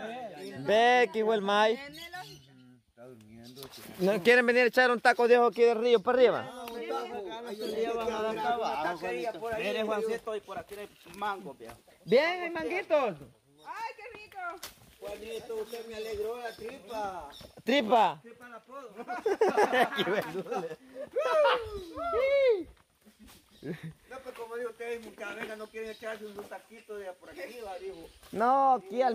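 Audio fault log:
No faults heard in this audio.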